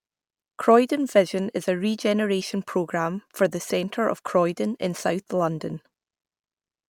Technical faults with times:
none

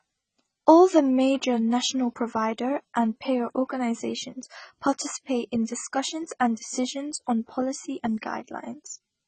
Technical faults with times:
0.00-9.27 AAC compression

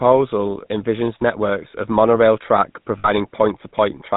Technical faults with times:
0.00-4.16 GSM full-rate codec
2.98-3.10 lost GSM frames

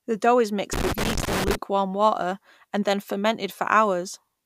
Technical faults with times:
0.73-1.55 loose connector crackle

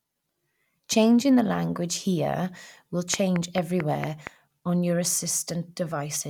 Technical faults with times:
3.14-4.28 train of clicks

